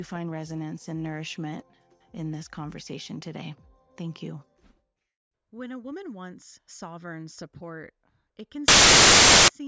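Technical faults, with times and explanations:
8.68 to 9.48 s, file tags played as audio: an embedded cover picture gets read as if it were samples. Because it's compressed image data, it comes out as very loud white noise, a hard-edged burst of static about 0.8 s long that switches on and off abruptly.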